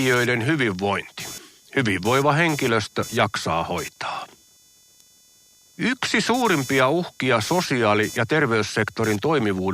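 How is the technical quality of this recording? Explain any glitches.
The recording is marred by one fault that runs through the whole of the speech.

Computer activity noise, present from start to finish: a buzzing, chirping layer pulses at roughly 500 times a second, sitting around 20 dB below the speech. It comes from the computer's processor, graphics or mouse load shifting the ground that the audio circuit shares, so the interference rises and falls with what the machine is doing rather than following the talker's phrasing.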